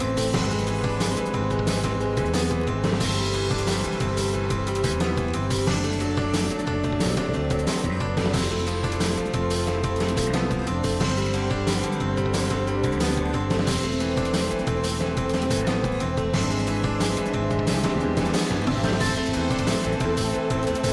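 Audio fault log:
No faults detected.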